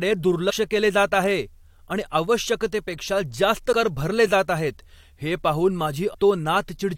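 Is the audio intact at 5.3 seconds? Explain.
Yes, at 5.3 seconds the speech plays through cleanly, with no audible dropout, click, distortion or other fault at that moment.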